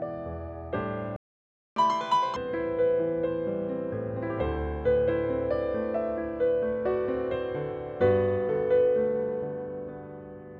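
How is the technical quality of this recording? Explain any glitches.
The recording has two linked glitches early on: a gap in playback and a fast, high-pitched burst right after it.

Playback stall, 1.16 to 1.76 s: the player most likely ran short of buffered data, or its playback thread was held up, so nothing reached the output for about 600 ms. The audio cuts to silence in mid-flow, leaving a clear hole of a little over half a second before sound returns and carries on from where it broke off.

Catch-up at higher speed, 1.76 to 2.36 s: to recover the lost time, the player resamples its backlog and runs it at twice normal speed. Because resampling shifts speed and pitch together, this stretch sounds rushed, raised by roughly 10 semitones, close to an octave. After about 600 ms the rate drops back to normal speed and pitch.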